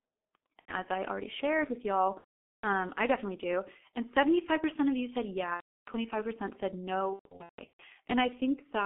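G.723.1 codec damage runs through the whole speech clip. The line passes only about 250 Hz to 3.4 kHz, and the coder rebuilds each 30 ms frame from a coarse, slowly updated vocal model, which fits its 6.3 kbit/s mode. The damage is heavy: the voice sounds muffled and hoarse, consonants smear into one another, and fricatives lose their edge because everything above the band is gone.

VoIP packet loss concealed by the speech codec occurs at 0.59 to 0.74 s, 2.18 to 2.65 s, 5.55 to 5.91 s and 7.13 to 7.83 s. The gaps last 90, 450 and 330 ms. The last episode is 450 ms of loss scattered over 660 ms, with its longest run 150 ms. With no new data, the decoder repeats its last pitch and filter at falling gain, stretching the sound into a buzzy tone or coloured noise that fades. Because each frame builds on the previous one, the voice stays weak or distorted for a while after packets resume.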